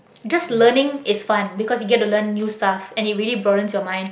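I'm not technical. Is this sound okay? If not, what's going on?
Yes, nothing wrong can be heard in this speech recording.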